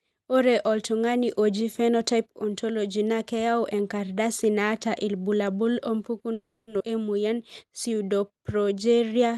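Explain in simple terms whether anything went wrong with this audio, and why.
Three things go wrong, all in the last few seconds of this speech.

From 6.33 to 6.69 s there is a call audio freeze. The last sound is stretched into a fading buzz for about a third of a second, most likely because packets were held up on the way and the receiver's jitter buffer ran out. Nothing is lost: when the audio returns it picks up exactly where it stopped. That separates it from a dropout, where some speech would be missing.

Right after, at about 6.8 s, comes a skip ahead. Roughly a fifth of a second of speech is dropped, and the sound on either side is joined almost seamlessly, with only a tiny gap. A freeze adds a pause but loses nothing. A skip removes speech and adds no pause, so the speech seems to lurch forward.

From 7.21 s to 9.34 s there is a jitter buffer slow-down. The receiver rebuilds its reserve by repeating tiny slices of the voice, so the speech plays at about 90% speed, stretched by roughly a quarter of a second in total. 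The pitch stays the same, which distinguishes it from a slowed recording. Sounds become drawn out and may waver slightly, but there is no hard stop like the freeze.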